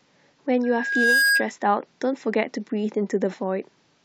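A short speech recording with a loudspeaker feedback squeal running from about 0.63 to 1.47 s. A single tone at 1.6 kHz creeps in and swells over roughly half a second until it sits a few dB above the speech, then drops away. What's going on is that the mic is catching the speaker it feeds, and at that one frequency the loop gain tops one, so the tone keeps feeding itself until the loop breaks.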